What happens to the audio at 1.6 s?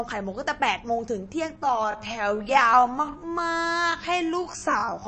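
From 1.53 s to the end, the speech suddenly slows to about 0.6 times its pace with unchanged pitch, so it drags: likely a time-stretched section, repeating short pieces to lengthen it. Throughout, the sound is also watery and swirly, likely MP3 compression at a low bitrate near 34 kbps dropping the treble and weak frequency lines.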